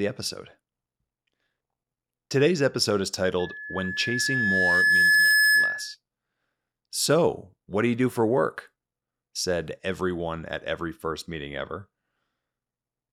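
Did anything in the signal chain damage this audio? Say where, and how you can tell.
Yes: a loudspeaker feedback squeal from 3.39 to 5.95 s, just after "episode is," in the analogue microphone-to-speaker loop. A steady 1.7 kHz tone swells over roughly two seconds to about 10 dB above the speech, because loop gain at that frequency exceeded one.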